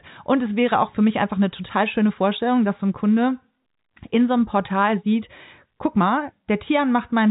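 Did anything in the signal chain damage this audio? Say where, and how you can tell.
No, nothing in the chain damaged this speech; the band stops at about 3.8 kHz, which is what the telephone path imposes and fits 64 kbps G.711 A-law coding working as intended, and none of its coding noise stands out.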